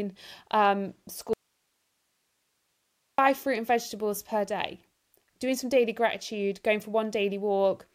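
At 1.33 s the speech cuts out abruptly, and until 3.18 s there's nothing but hiss, sitting around 50 dB below the normal level, before it snaps back in on "fruit and vegetables per". That's an audio dropout to a faint residue: the signal goes missing for about 1.85 s. The likely cause is the source being lost while the path after the break stayed live, so you hear its noise floor rather than a clean pause or a fade.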